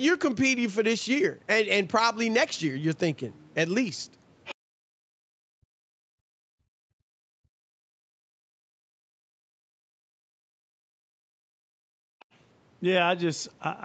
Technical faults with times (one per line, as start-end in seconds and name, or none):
4.45-4.55 other side's voice leaking through
4.55-4.75 background gated by the echo canceller
5.03-7.93 speech suppressed in double talk
8.21-9.69 background gated by the echo canceller
8.91-11.31 speech suppressed in double talk
11.59-12.19 background gated by the echo canceller
12.19-12.25 other side's voice leaking through